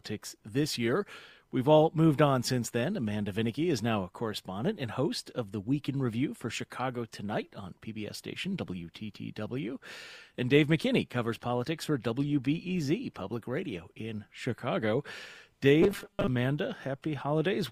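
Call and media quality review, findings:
Robotic sound from repeated short buffers, 15.82 to 16.28 s. Rigid metallic buzz at a fixed 200 Hz pitch, which fits a 5 ms chunk looping. Likely cause: the receive path starving and replaying its last buffer, skipping most of the real audio. Unlike codec warble, the pitch stays locked instead of smearing.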